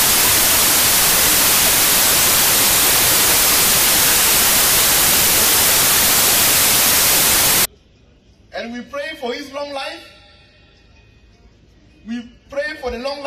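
From the start to 7.65 s, a wrong sample width fault: the samples are being read with more bytes each than they were written with, which fits packed 24-bit data taken as 32-bit. The sound becomes loud noise burying the original, which runs 1.33 times too fast and too high.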